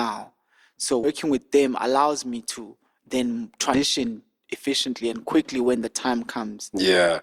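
At 1.03 to 1.08 s and again at 3.73 to 3.80 s, the speech jumps forward because compressed frames were skipped. Whole blocks of coded audio never reach the output, roughly a tenth of a second the first time and about 150 ms the second, which fits runs of 20 ms frames. Unlike a hard dropout, there is no silence gap, only a sudden jump where the speech after the missing stretch is joined straight on.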